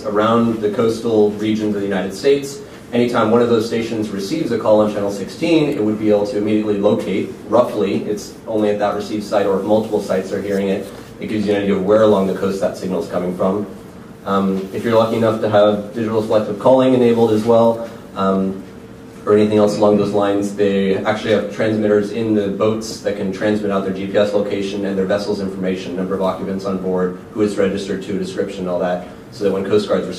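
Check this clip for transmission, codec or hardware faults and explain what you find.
No transmission, codec or hardware faults can be heard anywhere in the clip; the signal stays continuous and stable throughout.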